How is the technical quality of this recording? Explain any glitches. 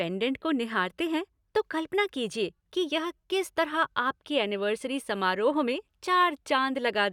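Nothing jumps out as a glitch in this speech recording, so there's no fault here to explain.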